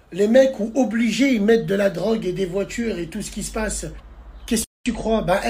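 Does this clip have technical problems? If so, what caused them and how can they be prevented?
Yes. At 3.96 to 4.00 s a brief glitch breaks through. This is damaged data in a compressed stream. Corrupted bytes made the decoder misread frames, lose sync and jump ahead to the next valid header. Checksums and error-protected transport prevent it.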